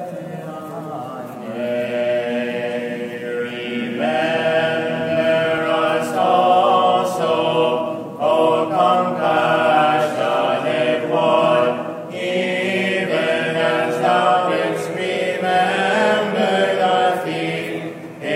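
From the start of the audio to 5.58 s there is a doubled audio track: a second, full-band copy trails roughly 0.4 s behind, about 10 dB quieter, with no decay or room colour, then stops abruptly. Likely cause: a slower second capture path mixed in.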